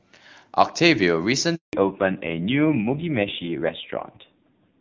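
At 1.55 s the speech cuts out in a handover gap. The call switched networks and no frames arrived for about 180 ms. The sound falls away quickly and stays silent until 1.73 s. Whatever was said then is gone.

From 1.73 s to the end there is a fallback to narrowband. Before it, the HD Voice sound carries clear high detail, fitting AMR-WB near 23.85 kbit/s. Afterwards nothing remains above 4 kHz. The speech turns dull and rough, which points to AMR-NB around 5.9 kbit/s.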